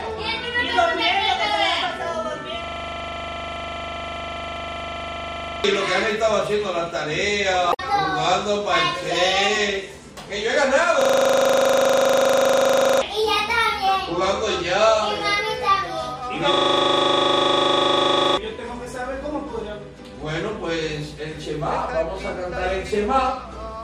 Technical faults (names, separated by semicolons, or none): system hang loop; damaged data in a compressed stream